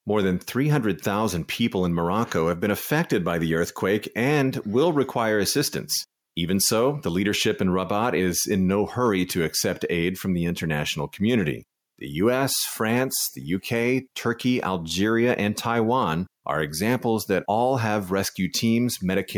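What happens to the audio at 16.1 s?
Nothing goes wrong at 16.1 s; the speech plays through that moment intact, with no dropout, click or distortion.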